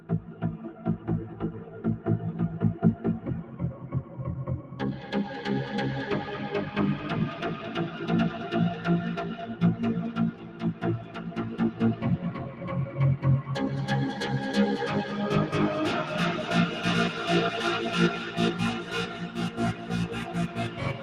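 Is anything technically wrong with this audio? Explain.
Yes. A noise suppressor applied to music or sounds has been left running for the whole clip. It's a speech-oriented processor, so it treats steady, sustained material and ambience as noise and pulls it down, while sharper attacks slip through. The result is a level that swings by around 10 dB as the suppressor clamps and releases, giving the sound a pumping, thinned-out quality rather than a natural, even body.

On top of that, there are specific stretches where the sound is cut by the noise suppressor: 0.0–0.42 s (dropping about 8 dB), 0.73–2.06 s (about 6 dB), 3.43–4.19 s, 4.62–4.79 s, 10.32–11.33 s, 12.37–12.65 s, and from 18.82 s to the end, all of those about 7 dB down. In each, sustained or decaying material gets mistaken for noise, so it sinks and its tail is cut short.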